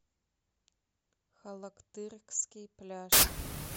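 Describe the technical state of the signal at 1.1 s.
At 1.1 s the speech signal is intact, with no dropout, distortion or other audible fault at that point.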